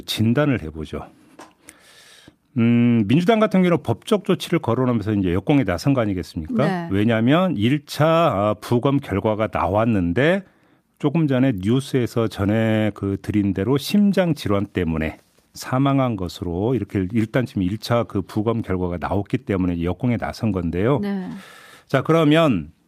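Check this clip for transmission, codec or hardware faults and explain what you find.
No transmission, codec or hardware faults turn up in this clip.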